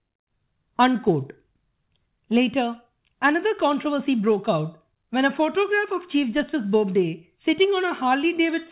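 Speech heard through a WebRTC call path with nothing above 4 kHz, which points to G.711 mu-law at 64 kbps, and no technical faults to report.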